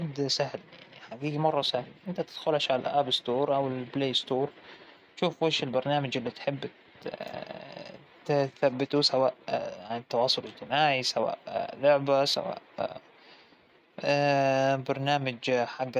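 No technical faults can be heard anywhere in this speech recording. There is nothing in it to place on a timeline or trace back to a cause.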